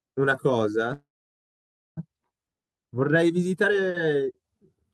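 Speech with a call audio freeze from 0.93 to 1.99 s: the last sound is briefly carried on, then the audio falls silent for about 0.92 s and resumes where it stopped, losing nothing but running about 1 s late, likely from delayed packets draining the jitter buffer.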